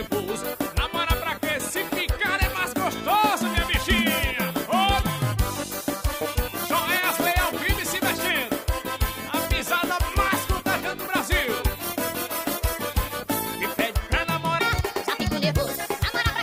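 A section at the wrong speed runs from 14.60 s to the end of the audio at 16.43 s. In that final stretch the sound plays back 1.4 times faster than it was recorded, so everything is both hurried and raised in pitch by about five semitones, the two shifting together at the instant the section begins. The likely cause is that this portion was clocked or resampled at the wrong rate when it was edited or played back.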